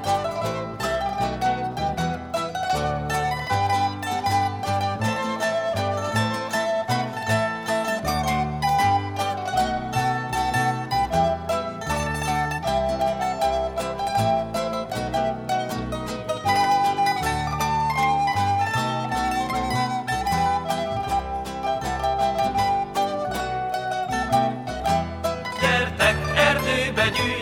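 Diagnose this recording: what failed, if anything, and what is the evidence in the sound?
Nothing in this recording points to a failure at any stage of the chain. No event in the sound calls for a diagnosis.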